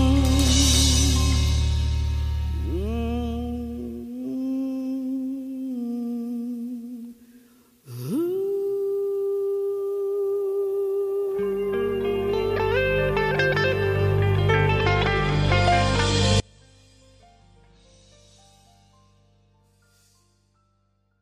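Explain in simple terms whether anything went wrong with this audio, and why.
Audio dropout to a faint residue from 16.4 s to the end: the sound abruptly drops to a faint trace, likely because the signal was lost.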